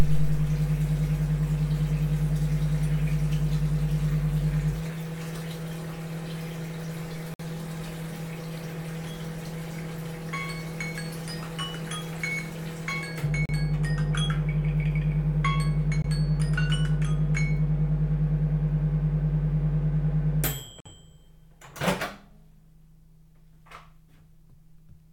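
Four brief cuts to silence turn up at 7.34 to 7.40 s, 13.46 to 13.49 s, 16.02 to 16.04 s and 20.80 to 20.86 s, lasting 55, 35, 22 and 52 ms. They're Bluetooth stalls, likely interference holding packets back until the headphone buffer ran dry.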